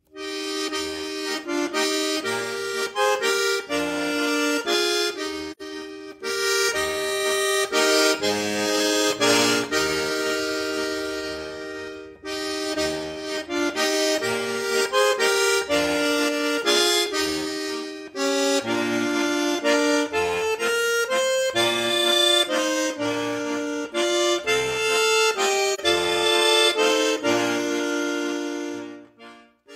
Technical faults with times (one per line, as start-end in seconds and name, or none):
5.52-5.62 AAC frame loss with muting
25.74-25.80 AAC frame loss with muting